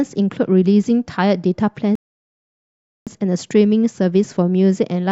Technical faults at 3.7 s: none

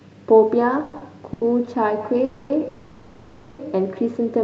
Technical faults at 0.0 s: none

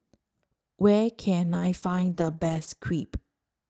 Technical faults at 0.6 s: none

